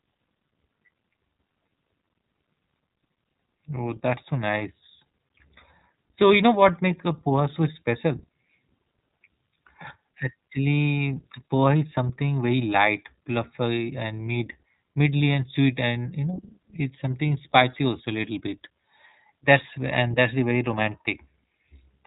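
Throughout the clip the speech has passed through the iLBC codec, whose coarse, frame-by-frame coding, consistent with its 13.33 kbps, 30 ms frame mode, leaves plainly audible damage: the voice sounds rough and slightly synthetic, and nothing above 3.8 kHz remains, giving a narrow, telephone-like tone.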